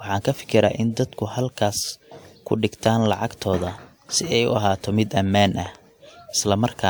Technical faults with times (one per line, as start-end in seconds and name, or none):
0.00-6.89 transcoding between lossy codecs
2.86-3.08 loud pop
5.66-5.77 loud pop